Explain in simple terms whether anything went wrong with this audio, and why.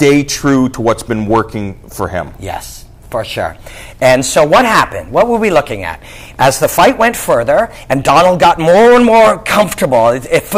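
The whole clip suffers from hard clipping, from start to finish. The sound was pushed well past what the recording could handle, so the loudest moments got their tops sliced flat. That's the harsh, fuzzy crackle you hear on the loud bits, roughly one part in twenty.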